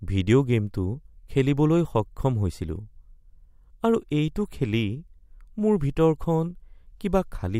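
Nothing to flag here: the speech runs along without any technical faults turning up anywhere in the recording.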